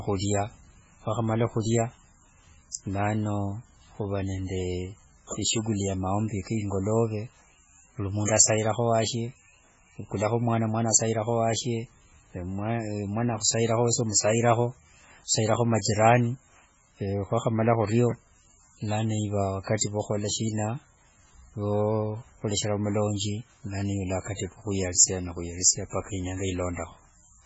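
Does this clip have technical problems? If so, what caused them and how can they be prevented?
Yes. Throughout the speech the sound is watery and swirly, with smeared consonants, likely from heavy MP3 compression at a bitrate fitting about 16 kbps. The encoder discards everything above 7.7 kHz and drops weak frequency lines frame to frame, so a spectrogram shows a hard ceiling at 7.7 kHz with flickering gaps below. Encoding at a much higher bitrate, or keeping a lossless copy, would prevent it.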